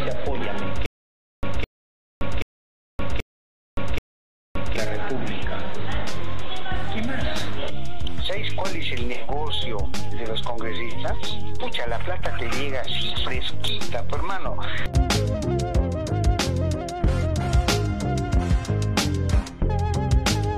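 You get a stutter with silent gaps from 0.86 to 4.76 s. A short burst of about 210 ms plays, then drops into roughly 571 ms of dead digital silence, and that same fragment comes back five times on an even cycle of around 781 ms. The likely cause is a stalled player or stream that replays its last buffered chunk on each retry and then runs dry, so whatever audio belonged in those gaps is simply missing.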